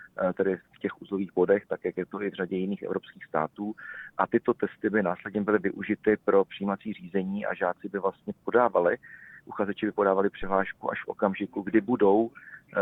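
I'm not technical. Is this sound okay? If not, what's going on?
No. At about 10.42 seconds there is a phantom power thump: a short, deep bump that dies away within about a twentieth of a second and is gone by 10.63 seconds. It happens when the power a microphone draws through its cable is switched on or off while the input is live. That sudden jump in voltage passes through the equipment and comes out as a low knock.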